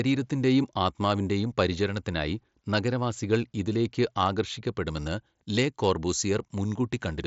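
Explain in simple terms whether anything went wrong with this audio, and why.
From 4.86 s to the end of the clip, the speech suddenly turns thin, bright and hissy on its s and sh sounds. This is pre-emphasis left on: the treble was deliberately boosted for transmission, following the standard 50-microsecond FM curve, but the matching treble cut that should undo it afterwards was never applied. The extra brightness sits on top of the Bluetooth mSBC headset sound, which already stops at about 7.7 kHz.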